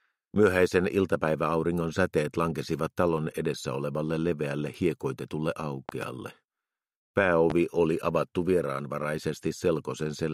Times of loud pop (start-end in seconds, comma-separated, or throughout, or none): 5.89-6.06, 7.50-7.54